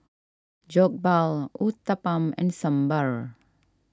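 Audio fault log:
Nothing to log here; this speech clip comes through without any technical faults to report.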